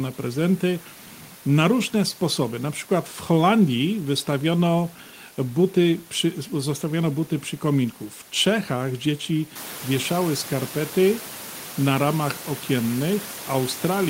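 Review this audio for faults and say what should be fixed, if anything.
Nothing in this recording needs fixing. The background noise of the room rises by about 13 dB at around 9.5 s but stays about 16 dB below the speech, and it is part of the recorded space rather than a fault.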